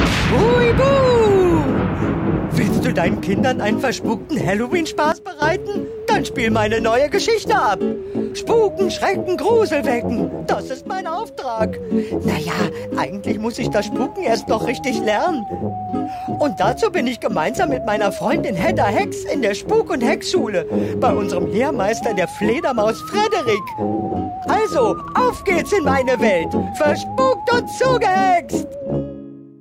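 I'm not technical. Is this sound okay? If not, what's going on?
No. The level drops abruptly twice, from 5.12 to 5.42 s and from 10.54 to 11.61 s, with the background falling along with it. This is a sudden gain jump, likely a volume setting switched instantly instead of being faded.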